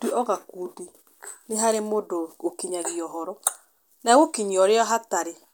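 Nothing in this speech recording points to a technical fault in the signal path.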